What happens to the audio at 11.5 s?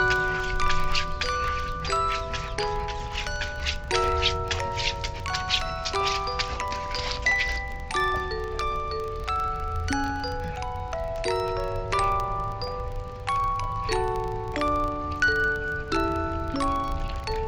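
At 11.5 s you're hearing the filter restarted on every block, which runs through the whole clip. The filter drops its state and starts each block from silence, so every block opens with a small transient, giving a 25 Hz buzz that rises and falls with the sound's level.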